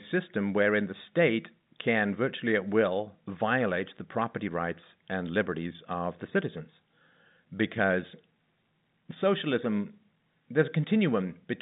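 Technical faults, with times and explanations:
No technical faults heard in this telephone-band speech.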